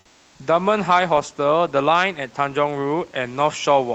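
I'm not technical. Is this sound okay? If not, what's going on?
No. Two things are off.

The first is gain pumping, heard all the way through. The background sound gently rises whenever the speaker pauses, then dips each time they speak loudly, so the quiet hiss seems to breathe in and out with the speech. The likely cause is a microphone level set too high, with an automatic level control quickly turning it down on every loud moment and back up afterwards. The swing is modest, not dramatic.

The second is comfort noise in place of the background, during the first 0.31 s. At the very start, before the speech begins, the room sound is replaced by a smooth, featureless hiss that is a little quieter than the real background that follows. This is likely the call software pausing transmission while it detects no speech and filling the gap at the receiving end with made-up noise meant to resemble the room.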